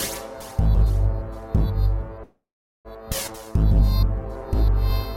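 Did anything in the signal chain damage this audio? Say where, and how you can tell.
Yes. From 2.23 to 2.88 s the sound stalls into a fading buzz or hiss, then about 0.46 s of silence. This is a call audio freeze, likely from delayed network packets draining the jitter buffer.

At 3.27 to 3.31 s playback jumps forward with almost no gap, losing roughly a fifth of a second. This is a skip ahead, where the network or jitter buffer discarded audio.

From 3.38 to 5.15 s the sound drags at 97% speed with unchanged pitch, gaining 57 ms. This is a jitter buffer slow-down from repeated pitch periods rebuilding its reserve.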